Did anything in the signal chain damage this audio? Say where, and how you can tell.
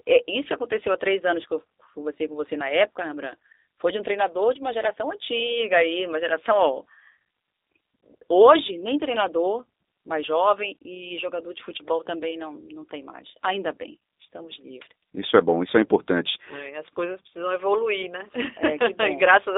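Yes. Plainly audible G.729 codec damage runs through the whole speech clip, confined to about 250 Hz to 3.7 kHz. It sounds rough and synthetic, which fits 8 kbit/s coding that rebuilds each 10 ms frame from a vocal-tract filter, pitch predictor and sparse pulses.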